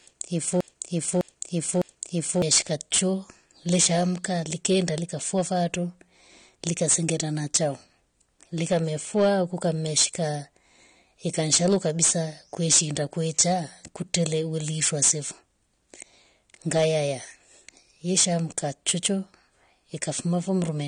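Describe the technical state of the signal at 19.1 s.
At 19.1 s the speech carries a harsh, gritty fuzz on its louder syllables, the same distortion present from start to finish. This is hard clipping: the signal is driven about 18 dB beyond what the chain can pass, so its peaks are sliced flat. Only a small share of samples, around 2 percent, hit that ceiling, but each flattened top adds harmonics high in the spectrum, producing the crackle and rasp on every peak.

Underneath that, the sound is dull and smeared, with nothing above 9.7 kHz and a watery, fizzy texture on sibilants and held sounds. Such damage is plainly audible and persists throughout the clip. The likely cause is AAC compression at a low bitrate, consistent with something near 32 kbps. To save data, the encoder has lowered its cut-off and coarsely quantised the remaining frequency lines, leaving swirling artefacts in the upper spectrum.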